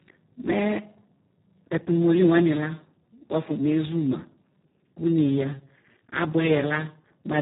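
From start to finish the speech carries heavy Speex codec damage, a hoarse, buzzy, near-robotic grain consistent with a roughly 4 kbps setting starving the excitation. Unlike a simple band limit, nothing above 3.8 kHz survives and the remaining band itself sounds coarse.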